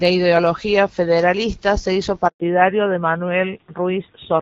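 At 2.28 s the speech cuts out in a handover gap: the call is passed from one network to another and no speech frames arrive for 120 ms, until 2.40 s. The sound fades within a few tens of milliseconds and then there is true silence. Ordinary packet loss would be masked by concealment, which stretches or repeats the last sound. Here there is no smeared or buzzy fill, and the band changes as soon as audio returns.

From 2.40 s to the end there is a fallback to narrowband. Before the gap the wideband HD Voice coding sounds clear, with only light codec damage. After it, nothing above 4 kHz remains, so sibilants lose their edge and the speech turns dull and rougher. The texture fits a switch from AMR-WB at 12.65 kbit/s to AMR-NB at about 7.4 kbit/s. A simple low-pass filter would not add that roughness, and it would not switch on right after a silent break.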